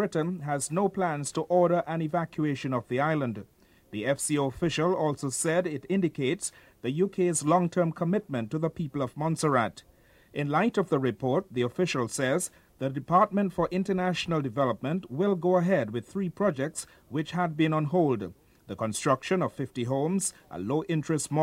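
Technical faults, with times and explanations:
14.61 s, dropped samples: a couple of samples likely went missing from the stream, so the waveform jumps abruptly between values, producing one sharp, brief click.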